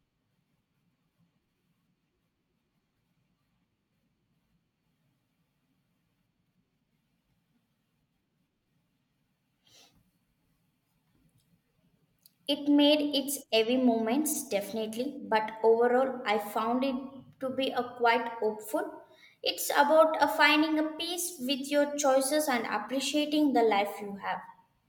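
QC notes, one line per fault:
No faults heard.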